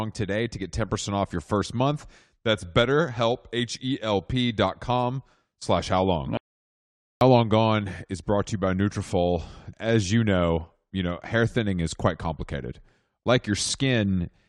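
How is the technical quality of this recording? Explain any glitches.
One glitch affects the recording. From 6.37 to 7.21 s, just after "com slash how long", an audio dropout to silence cuts the speech off into silence with no room tone. About 0.84 s of speech is missing, likely because the input link failed while recording continued.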